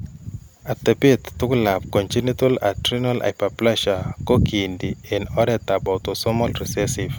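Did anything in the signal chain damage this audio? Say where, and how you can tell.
No, nothing in the signal chain audibly damaged this speech recording, and no stage left any trace of trouble on it.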